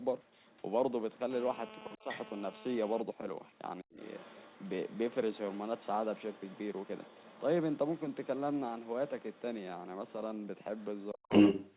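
Speech with the other side's voice leaking through at 0.23–0.6 s, 1.14–1.19 s, 2.09–2.18 s, 3.49–9.42 s and 10.08–11.76 s. It is likely residual echo the canceller missed, faint early, louder than the talker by the end. A GSM phone buzz runs from 1.31 to 3.02 s. It is a steady, raspy 217 Hz drone about 15 dB below the speech, typical of a nearby phone in a call. The speech is likely suppressed in double talk at 1.96–2.09 s, 3.81–3.99 s and 11.12–11.32 s. The talker dips by roughly 20 to 40 dB while both sides speak. The audio stops at 4 kHz, which fits a G.711 A-law call path.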